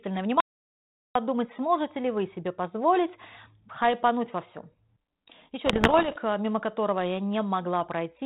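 At 0.40 s the speech cuts off dead and returns at 1.15 s, an audio dropout to silence lasting about 750 ms. The gap is silent with no room tone or hiss under it, and both edges are abrupt mid-flow. That sets it apart from a noise gate or a pause, which would leave some background. Whatever was said in that stretch is gone. The likely cause is the input being lost while the recorder kept writing silence.

From 5.66 s to 6.16 s come bit errors on an ADPCM link. They sound like pops and gritty bursts, with the level jumping briefly up and down. They differ from simple digital clicks because each error throws off the decoder's adaptive step size and prediction, so the damage smears on for a few milliseconds instead of ending in a single tick. The error rate is around one and a half percent. Throughout, the band stops below 4 kHz with a faint grain, which fits 32 kbit/s G.726 coding.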